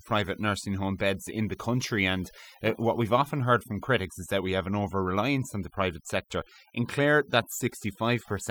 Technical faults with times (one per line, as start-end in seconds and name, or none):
0.00-8.51 overdone noise removal